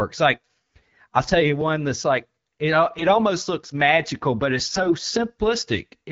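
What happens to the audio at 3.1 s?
From 2.98 to 3.17 s the sound turns hoarse, scratchy and gargly: AMR bit errors. Flipped low-priority bits, a few percent of them, across what fits about nine frames of the AMR-WB stream, misplace the excitation pulses and skew the fine pitch, gain and spectral values. Unlike frame loss, it neither mutes nor repeats: pitch and level hold while the texture roughens.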